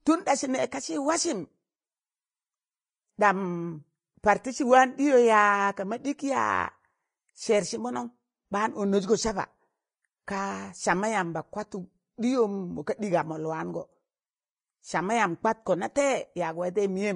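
Vorbis compression runs from start to finish across this speech clip, with plainly audible damage. Nothing remains above about 10.6 kHz, where the encoder has cut the treble away. Below that, the upper band sounds hissy and grainy: sibilants turn to rough noise and consonant attacks are smeared, because fine spectral detail has been replaced by noise of similar energy. The result points to a low setting of roughly 29 kbps, likely an aggressive Vorbis encode.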